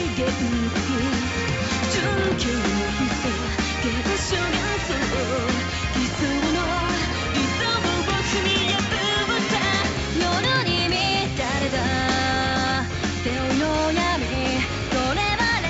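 Nothing stood out on listening; the audio keeps the narrowed top end, nothing above 8 kHz, expected of a call's microphone processing and WebRTC path.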